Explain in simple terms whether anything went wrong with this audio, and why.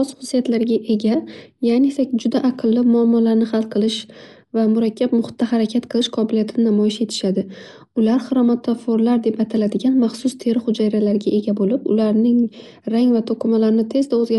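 The speech sounds dull and muffled from start to finish, as if the brightest part of the sound had been trimmed away. Nothing comes through above about 11.4 kHz. Quieter details have a rough, fluttery hiss clinging to them. This is most likely Dolby Digital compression squeezed too hard. To save space, the encoder dropped the highest sounds and left many fine details uncoded, and the player fills those gaps with made-up noise.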